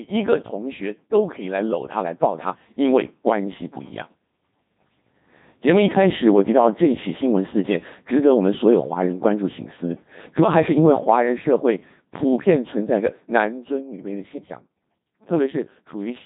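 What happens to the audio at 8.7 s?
At 8.7 s the speech is still passing through the Codec 2 vocoder, as it does throughout, so the waveform is resynthesised from sine waves. It sounds robotic and buzzy, cut off above 3.8 kHz, with heavy damage consistent with about 2.4 kbit/s.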